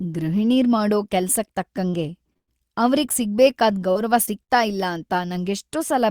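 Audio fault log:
1.89 to 1.95 s, 2.33 to 2.37 s, 3.91 to 3.97 s and 4.25 to 4.29 s: short concealed packet loss. Each time a small piece of the speech arrived too late or not at all. The longer gaps lose about 40 ms, the shorter ones about 20 ms. The receiver filled each hole by extending the sound just before it, then blended back into the real signal. The result is a brief smear or wobble, and a short consonant can drop out.
2.37 to 2.49 s and 4.43 to 4.51 s: burst of packet loss. Here several packets in a row went missing, about 100 ms and 60 ms of speech. The first burst follows directly on the short loss at 2.33 s, so the damage there runs together. The receiver held the last sound and faded it. At 2.37 s the fill decays to silence for about 100 ms. Speech then resumes further on, and the part in between is gone.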